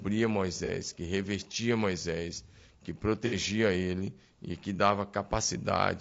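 From start to finish the speech carries the rough, grainy texture of low-delay AAC compression, likely AAC-ELD as used in video calls. Its short frames resolve the voice's harmonics poorly, so noise fills the gaps between them and the top band sounds thin and synthetic. The damage is plainly audible and fits a low rate of around 32 kbps. At that rate the short frames leave too few bits to keep the harmonic structure clean.

From 0.12 s to 6.0 s a soft, steady rattle of clock slip clicks runs under the speech. The ticks come about every 0.03 s, roughly thirty a second and around two hundred in all. The likely cause is two devices running on unmatched clocks, with an error of roughly 700 ppm. Each slip drops or repeats a single sample, and the rattle is clearest on louder, sustained sounds.

At 0.65 to 0.70 s there is AAC frame loss with concealment. A 30 ms gap, consistent with one lost frame, has been filled in by the decoder from the last good spectrum. 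It comes through as a brief smeared, noisy patch instead of a clean dropout.

A second loss at 3.26 to 3.35 s lasts 60 ms, consistent with two frames. The concealed stretch is longer, a smeared, phasey patch before normal decoding resumes.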